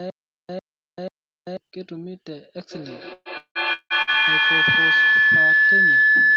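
From the very start until 1.57 s, a stutter with silent gaps is already under way. A 101 ms fragment plays, then about 389 ms of digital silence follows. It repeats three times, every 489 ms. A stalled stream retrying is the likely cause, and the audio meant for those gaps is lost.

A feedback howl begins at 2.69 s and runs to the end. A loop between microphone and loudspeaker gains level on each pass. It narrows to a tone of roughly 1.5 kHz that pulses about every 150 ms. At its peak it sits about 14 dB above the speech.

Within the howl, from 3.13 to 4.17 s, repeated packet loss gives a choppy, robotic sound. There are five gaps, and the longest lasts 177 ms. About 540 ms is missing, and 530 ms is patched by stretching the last sound, so about half of the stretch is concealed.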